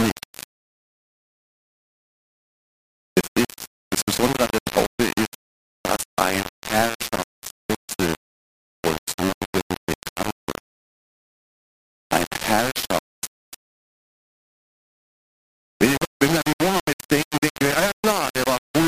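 Grainy, gritty distortion runs through the whole clip, shifting with the sound, and quiet passages sputter or vanish. Likely cause: low bit depth without dither, rounding to about three bits.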